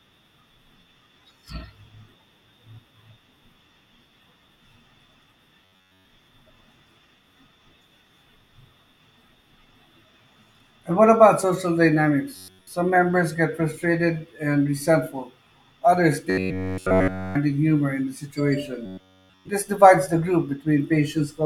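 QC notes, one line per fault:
5.65–6.05 s, 12.36–12.67 s (just before "members get frustrated and"), 16.30–17.35 s (just before "humor in the") and 18.86–19.49 s: robotic sound from repeated short buffers. The speech collapses into a rigid metallic buzz pinned at 93.8 Hz, built entirely from repeats. It's likely a starved stream looping a chunk of about 10.7 ms while the real audio gets skipped.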